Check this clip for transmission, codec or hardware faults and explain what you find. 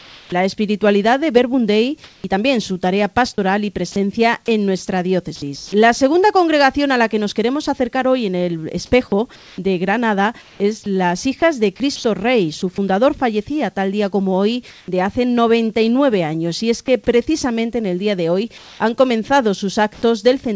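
Two kinds of fault turn up, both tied to discontinuous transmission on a call path whose G.722 coding leaves nothing above 8 kHz.

Sound chopped by the voice detector runs from 0.0 to 5.72 s and from 9.36 to 12.62 s. The sender's detector likely toggled repeatedly, swapping about 0.78 s and 0.5 s of quieter sound for comfort noise. The sound has holes in it.

Comfort noise in place of the background appears at 14.70 to 14.88 s and 18.58 to 20.02 s. The sender likely stopped transmitting, and the receiver filled 180 ms and then 300 ms with smoother synthetic noise. At the first fill the background sits about 33 dB below the loud passages, and the fill is about 1 dB off that real background.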